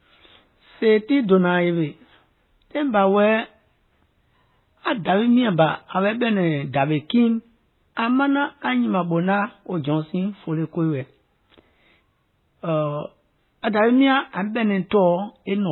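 Throughout the speech, nothing is present above 4 kHz, and the sound has the smeared, watery texture of heavy MP3 coding. The likely cause is low-bitrate audio saved at a high bitrate: a source near 16 kbit/s re-encoded at a higher rate, which cannot restore the discarded detail.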